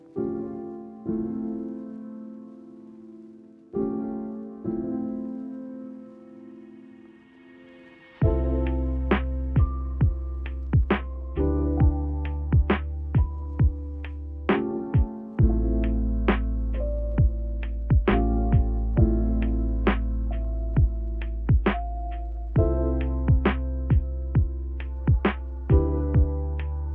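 No technical faults are audible.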